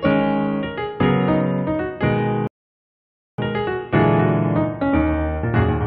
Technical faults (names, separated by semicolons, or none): rebuffering stall